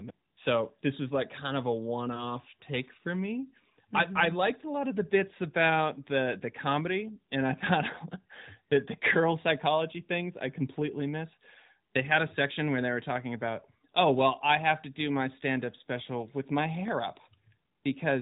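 At 16.88 to 16.90 s, just after "special with my", a single loud pop cuts in. It peaks a few dB above the speech, which carries on underneath through the narrowband phone sound. A brief voltage pulse, likely from a switch or static, caused it.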